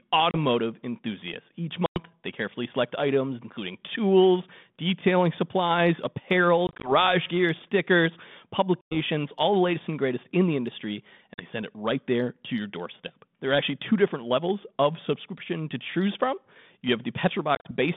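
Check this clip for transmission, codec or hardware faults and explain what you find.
Yes, there are faults: six episodes of packet loss on an ADPCM call.

Packet loss on an ADPCM call occurs at 0.31 s, 1.86 s, 6.67 s, 8.82 s, 11.34 s and 17.55 s. The first is a 30 ms gap. The one at 1.86 s is 100 ms and ends just before "they carefully select items". At 6.67 s, between "tools detailing supplies apparel" and "gear stickers", about 80 ms is lost in short bursts over 160 ms. At 8.82 s a 100 ms gap ends before "all the latest and". The gap at 11.34 s is 40 ms. The last, at 17.55 s, loses about 80 ms in runs up to 40 ms within 100 ms.

Lost audio is replaced by hard-edged silence. The receiving ADPCM decoder's predictor and step size then no longer match the sender's, so sound resumes slightly distorted before settling.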